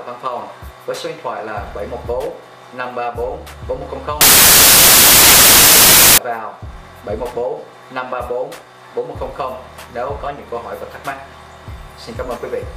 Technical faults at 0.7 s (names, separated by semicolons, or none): none